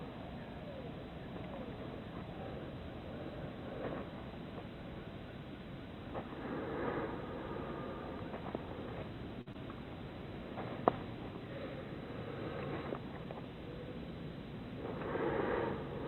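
At 9.41 to 9.48 s there is a short stall from a late packet. The jitter buffer ran dry, so the receiver held the last sound for about 50 ms until the packet arrived. Nothing is lost, but that moment lingers with a slight buzz or dip and the delay grows by 50 ms.

Immediately after, at 9.52 to 9.56 s, comes a short concealed packet loss. About 20 ms of audio never reached the decoder, and roughly 18 ms of synthetic continuation patched the gap. It is heard as a brief smear or wobble just after the stall.

From 13.11 to 13.57 s a jitter buffer speed-up trims excess buffered audio, cutting out pitch-period slices totalling around 50 ms. Playback runs at 111% speed with unchanged pitch, so this stretch sounds briefly hurried.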